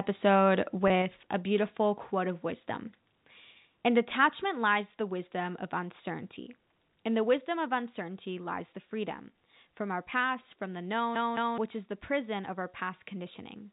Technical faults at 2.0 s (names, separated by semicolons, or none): microphone volume stepped down